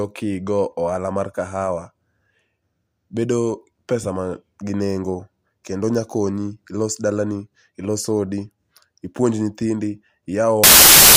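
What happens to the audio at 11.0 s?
Samples built from the wrong bytes, from 10.64 s to the end at 11.16 s: misassembled bytes turn low-order bits into loud, harsh broadband noise.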